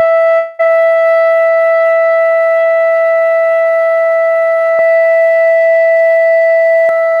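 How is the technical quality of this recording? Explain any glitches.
The recording has two faults: a break near the start and a stretch where the sound is doubled.

From 0.37 to 0.61 s there is a long network dropout. The audio stops arriving, and for about 0.2 s the receiver keeps extending the last sound as a fading buzz rather than going silent. When the signal resumes, the missing portion is simply gone and the sound jumps ahead. The likely cause is a gap in packet delivery.

From 4.79 to 6.89 s the clip carries a doubled audio track. A second full-band copy of the same sound runs roughly 0.7 s behind the first at about the same level. It has no reverberant tail or room colouring, and it starts and stops abruptly at those times. This likely comes from the signal being captured twice, once through a slower path, or from an edit leaving two offset copies.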